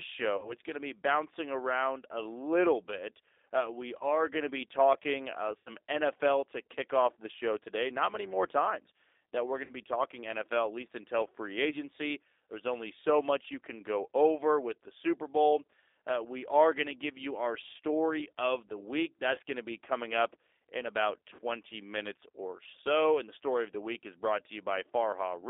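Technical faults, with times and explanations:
Throughout: G.729 codec. The speech is rebuilt from a vocal tract filter, pitch predictor and sparse pulses, so it sounds rough and slightly synthetic, which fits an 8 kbit/s G.729A link. A spectrogram shows energy confined to 300 Hz to 3.7 kHz, with smeared, grainy harmonics.
0.37–0.55 s, 3.98–4.06 s (just before "going to be talking"), 5.59–5.70 s, 9.65–9.72 s (between "times that we're going" and "be talking"), 11.69–11.81 s, 19.34–19.40 s (between "story of the week" and "going to be coming"), 21.35–21.40 s: VoIP packet loss concealed by the speech codec. Audio lasting 20 to 80 ms went missing each time. The decoder stretched its last pitch and filter into a fading buzzy tone or coloured noise, and the speech stays weak just afterwards. On a spectrogram these spots show flat, stretched bands. The waveform shows a signal that shrinks in amplitude.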